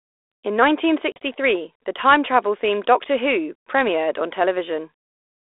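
At 1.12 s the speech drops into a hard-edged silence that lasts until about 1.18 s: packet loss on the ADPCM call, with roughly 40 ms of audio missing, about two packets' worth. The line is G.726 ADPCM at 32 kbit/s, band-limited to roughly 300 Hz to 3.6 kHz, and this codec sends only differences from an adaptive prediction. While the packets are missing, the receiver's predictor and step size drift out of step with the sender's, so the speech comes back briefly disturbed before it settles within a few tens of milliseconds.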